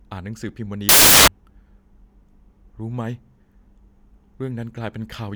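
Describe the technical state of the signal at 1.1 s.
At 1.1 s the signal is corrupted by samples built from the wrong bytes, a fault running from 0.89 s to 1.28 s. For this stretch of roughly 0.39 s, each sample's bytes are being assembled in the wrong order or with the wrong offset, so the rapidly fluctuating low-order bits land in the most significant position. The speech is swamped by loud, harsh broadband noise.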